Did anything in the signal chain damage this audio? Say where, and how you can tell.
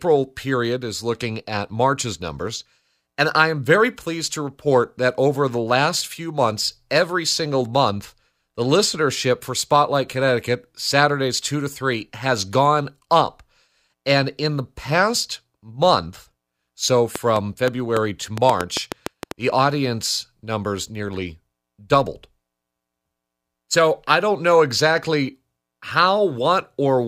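Yes. A train of clicks runs from 17.16 to 19.32 s, after "the past month so": about ten irregular pulses, 5.1 per second, about 15 dB over speech, likely analogue interference pickup.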